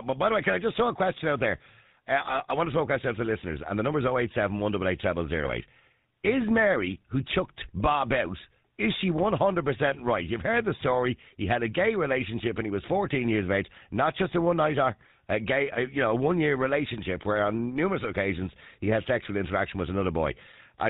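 The whole clip passes through the GSM full-rate codec at 13 kbps, which drops everything above 4 kHz and leaves the speech buzzy and gravelly throughout. From 5.44 to 5.52 s, GSM bit errors corrupt the decoder's filter, pitch and gain values, breaking the voice into a brief gargling squawk spanning about four frames.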